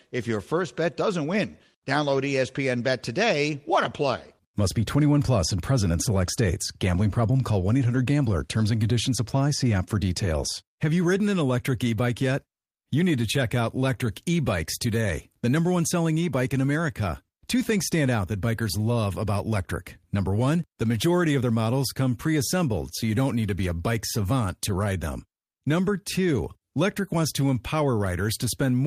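No technical faults can be heard anywhere in the recording.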